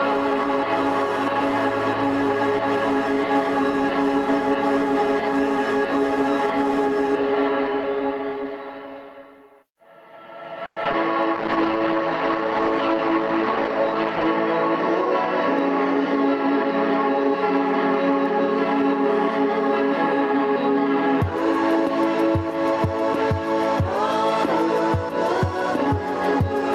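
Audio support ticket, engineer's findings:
Gain pumping, whole clip. Level swing around 10 dB. Likely cause: mic gain set far too high with a fast limiter or compressor clamping every peak. Loud and quiet parts squashed together. Differs from noise suppression breathing: the noise floor itself rises and falls with the program level, with no gating or spectral smearing.

Repeated packet loss (robotic sound), 10.65 to 10.95 s. Choppy stutter: four holes in about 0.3 s, each patched by stretching the previous sound, longest hole 110 ms. Roughly half the span is concealed, 140 ms filled versus 60 ms simply missing. Jitter buffer/PLC in the network path. Unlike a single dropout, the holes recur in quick succession, which gives the choppy texture.

Call bitrate drop, 11.36 to 14.35 s. Sound turns rough and watery, high end dulled, for about 2.9 s before recovering. Encoder behaviour, consistent with Opus cut from about 48 to 13 kbps after the bandwidth estimate collapsed. 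Coarser coding plus a lowpass at the lower rate. Distinct from the loss just before it: continuous degradation with no holes or stutter, and a return afterward.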